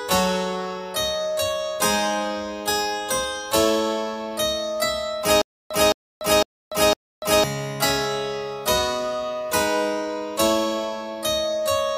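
From 5.42 to 7.44 s there's a stutter with silent gaps: a 216 ms burst repeats four times with 290 ms of silence between, likely a stalled stream.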